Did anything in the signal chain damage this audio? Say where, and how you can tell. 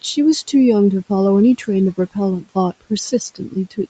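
Yes, in the call processing: there's speech cut by the noise suppressor near the end, between 3.35 and 3.78 s. Over roughly 150 ms in that stretch, the sound dips by up to about 12 dB and parts of the speech go faint and swallowed. The suppressor mistook those quieter, noise-like parts of the speech for background and gated them down along with the room noise.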